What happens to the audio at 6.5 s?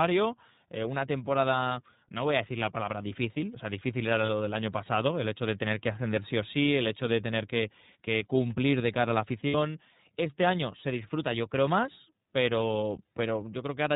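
iLBC codec coding is audible at 6.5 s, as it is across the whole clip. Each 30 ms block of speech is coded independently at a rate that fits iLBC's 13.33 kbps mode, with nothing above 4 kHz, so the speech sounds muffled, slightly rough and synthetic.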